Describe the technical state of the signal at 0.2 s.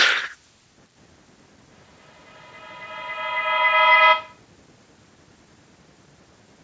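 At 0.2 s the speech is intact, with no dropout, distortion or other fault, and the call microphone processing is doing its usual job of trimming the lowest bass, with nothing above 8 kHz.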